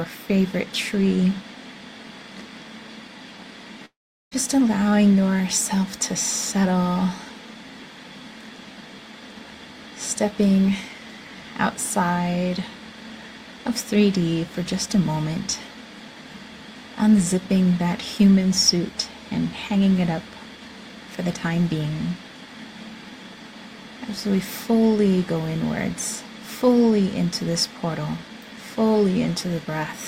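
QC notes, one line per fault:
3.85–4.33 s, long network dropout: the sound continues briefly as a fading buzz, then about 0.39 s of silence, and resumes with roughly 0.46 s of material gone. Likely a receiver concealing missing packets before running out of audio to extend.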